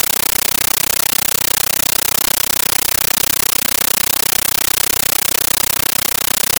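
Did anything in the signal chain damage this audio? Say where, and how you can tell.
Yes. From start to finish the clip is very loud, harsh, chattering static in place of the speech. Each burst of noise lasts about 13.3 ms and is followed by silence, repeating 31.25 times a second. This is a compressed stream played as audio at the playback link. An AC-3 (Dolby Digital) bitstream passed over S/PDIF or HDMI was treated as ordinary PCM samples instead of being decoded. Each frame's data plays as a noise burst and its zero padding as the gap. The density of the bursts fits a 640 kbps stream.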